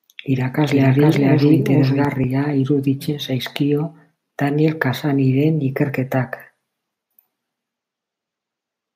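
A second capture path, or an edit that left two copies out of step, has most likely mixed the same speech in twice, producing a doubled audio track from 0.63 s to 2.05 s in this speech clip. The extra copy trails the original by around 400 ms at roughly equal loudness, with full bandwidth and no reverberant decay, so each syllable is heard again as a dry, distinct repeat. The copy starts and stops abruptly, ending just before "iruditzen zaizkio".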